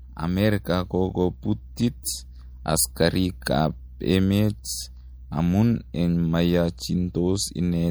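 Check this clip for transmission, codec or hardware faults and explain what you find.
Two codec faults turn up, one running through the whole recording and one brief event.

Throughout, heavy MP3 compression is likely at work: short of bits, the encoder trims the treble and drops weak frequency lines frame by frame, consistent with about a 64 kbps encode. The speech sounds plainly watery and swirly, with chirpy, metallic s sounds and smeared attacks.

At 1.76 s there is pre-echo: the codec spreads quantisation noise across a whole block, so noise meant for a sharp attack leaks into the quiet moment before it. A hiss of about 11 ms precedes the attack, which sounds soft and smeared.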